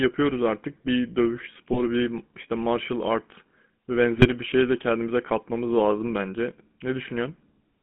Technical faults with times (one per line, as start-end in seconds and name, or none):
0.00-7.83 GSM full-rate codec
1.73-1.80 GSM bit errors
4.18-4.27 GSM bit errors